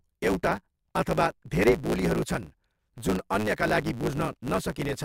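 A steady buzz at about 109 Hz runs under the speech from start to finish, and the talker sounds hurried, running about 1.16 times faster than natural while the timbre stays. This is a block size mismatch (truncated): one stage hands over longer blocks than the next stage takes in, and the tail of each block is discarded. The buzz rate fits 512-sample blocks being written, and the 1.16 speed-up reflects how much of each block is dropped.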